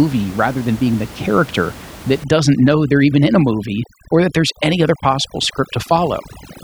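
From 2.24 s, right after "being the character that", to the end, overdone noise removal pulls down the room noise, about 19 dB below the speech, breaking it into twinkling specks.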